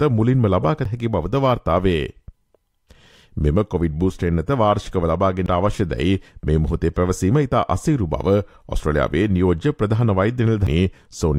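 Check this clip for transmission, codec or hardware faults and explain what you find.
Three abrupt skips stand out, at 0.85 s, 5.46 s and 10.67 s. Each is a jump forward with no gap, losing roughly a tenth of a second, somewhat more, then nearly a third. The likely cause is a dropped buffer (overrun), where unread capture data was overwritten and the surviving edges spliced together.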